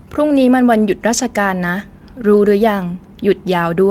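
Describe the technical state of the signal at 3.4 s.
At 3.4 s the speech signal is intact, with no audible fault at that moment.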